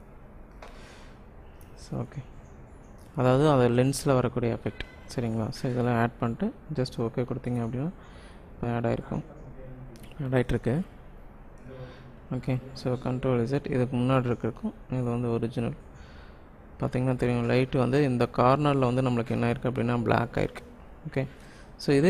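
At 8.63 s there is a skip ahead. About a second of audio is missing, and the playback jumps forward with no gap inserted: the material on either side of the cut is joined almost directly, so the sound lurches abruptly to a later point. The missing stretch was either lost in transit or dropped by the jitter buffer when it overflowed, while later audio was already queued; which of the two is not audible from the result.

Immediately after, from 8.67 s to 10.73 s, a jitter buffer speed-up follows. The buffer was still holding more audio than its target, so the receiver trimmed it down by repeatedly cutting out short segments of one or a few pitch periods. Playback runs at about 118% speed with the pitch unchanged, well past the point where the audio sounds hurried. Across those two seconds roughly 0.4 s of material is removed before normal pacing resumes.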